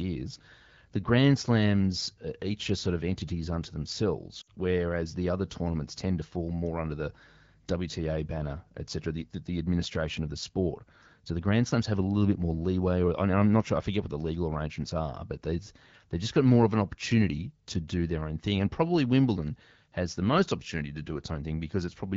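At 4.41 to 4.48 s, lost AMR speech frames: about 60 ms, fitting three 20 ms frames, failed and were concealed by the HD Voice decoder. The speech smears and fades rather than cutting to hard silence like a dropout, then returns briefly weak.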